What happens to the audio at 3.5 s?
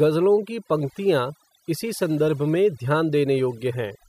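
At 3.5 s you're hearing overdone noise removal, and it runs through the whole clip rather than starting there. The reduction was set so hard that bands near its noise estimate get pulled right down, so the gaps sit in near silence with twinkly specks.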